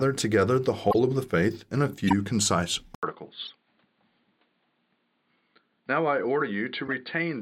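At 0.91 to 0.95 s there's a short, fairly loud chirp: a corrupt frame decoded. Flipped bits in the compressed data, probably across a couple of frames, got played as if valid, so misread gains and codes dumped energy at the wrong frequencies for just those frames. It recurs at 2.08 to 2.13 s a little softer, at 3.45 to 3.50 s as a quieter blip, and at 6.87 to 6.89 s as another faint squeak.

At 2.95 s the speech drops out for 80 ms and comes back duller and a touch quieter, with nothing above 4.6 kHz from there to the end. That points to the input switched to a poorer device, likely a narrower-band mic or headset profile. A new, faint noise floor sits well below the speech.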